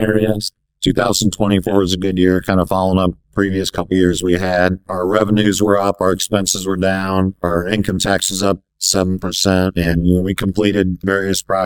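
Right through the clip there's overlap-add ripple: the windowed frames were stitched back together with an overlap that doesn't sum to a flat gain, so the level dips and swells around 100 times a second, by about 60 dB, giving a harsh, metallic robotic buzz.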